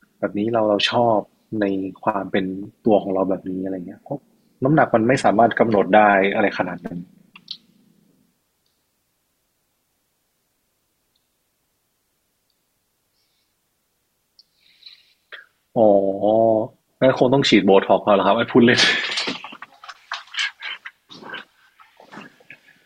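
No technical faults can be heard anywhere in the recording. At no point in the speech does anything in the signal stand out as going wrong.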